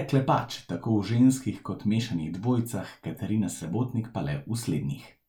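At 3.57 s the speech hits a Bluetooth stutter lasting about 36 ms, to 3.60 s. Late or missing packets forced the receiver to replay its last buffer, producing a brief repeated-slice buzz. Roughly 30 ms of audio is skipped when playback resumes, consistent with two lost frames.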